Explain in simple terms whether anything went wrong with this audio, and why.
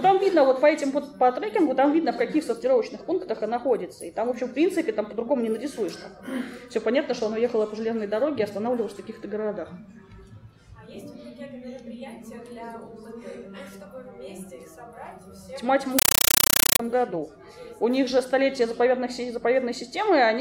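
From 15.99 to 16.80 seconds the sound is replaced by very loud, chattering static. This is a compressed stream played as audio: a Dolby Digital signal reached the player, which treated the coded data as ordinary sound instead of decoding it. Each block of data comes out as a short burst of noise, about 8 ms long, repeating 31 times a second. That steady machine-gun rhythm is what separates it from random crackle or a dropout.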